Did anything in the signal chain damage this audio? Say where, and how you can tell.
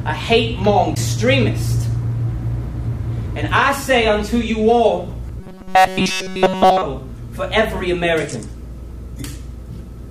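Yes. At the playback stage, the disc transport suffered a CD skip: the laser jumped to another turn of the spiral. At 0.95 s and again at 5.29 s there is a tick and a brief mute, then the sound resumes from a different point.

From 5.40 to 6.82 s the sound is likely damaged in the driver or buffer stage, with robotic sound from repeated short buffers. Essentially all of that stretch is a rigid, metallic buzz at 188 Hz, which fits a roughly 5.3 ms fragment being looped while new audio is skipped.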